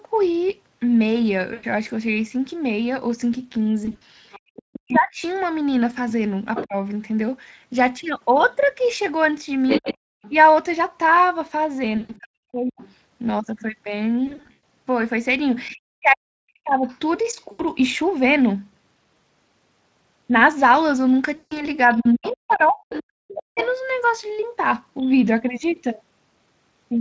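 Packet loss on the VoIP link forced the speech codec to conceal missing audio at 1.53, 3.85, 11.97, 14.27, 17.51 and 21.35 s. The decoder rebuilt the gaps, mostly 80 to 160 ms but 240 ms at 14.27 s, from its last pitch and filter state, so the speech smears into a buzzy, fading tone and stays weak briefly afterwards. The other side's voice leaks through, likely because the echo canceller left loudspeaker echo in the microphone signal. It is heard from 4.32 to 6.64 s and 9.68 to 16.98 s only about 5 dB below the talker, and from 21.93 to 25.03 s much fainter. Over roughly the same spans (4.41 to 6.76 s, 9.8 to 16.86 s and 21.87 to 23.61 s), the speech is suppressed in double talk, likely because the canceller could not separate both talkers. The talker's speech dips by up to roughly 40 dB in pieces totalling about 0.7, 1.5 and 1.0 s in the three spans. At 10.14 to 10.22 s the echo canceller gated the background, dropping the room sound by about 40 dB for roughly 70 ms before it returned.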